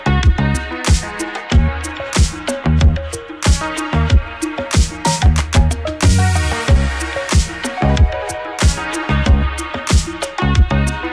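No technical faults can be heard anywhere in this recording.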